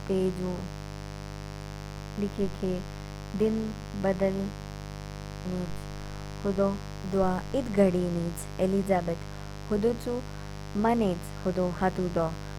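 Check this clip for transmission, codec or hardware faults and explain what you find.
A mains buzz runs through the whole recording, sitting only around 10 dB below the speech. Switching spikes from a dimmer, rectifier or poorly shielded cable arrive twice per 50 Hz cycle, and their harmonics extend into the kilohertz range. The result is a constant, raspy buzz under the speech.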